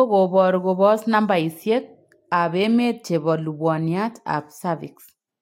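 Listening closely to the speech, nothing stood out as a technical problem at any point.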